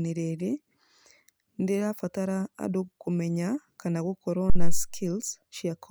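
At 4.50 s, just after "kana gũkorwo", a phantom power thump hits the speech. Supply voltage was switched on or off on a live input. The sudden step in voltage passed through the coupling capacitors into the signal path. It sounds like a deep, dull thud. It peaks at about -9 dBFS. The low-frequency energy dies away quickly, decaying over roughly 95 ms. The disturbance lasts until 4.92 s.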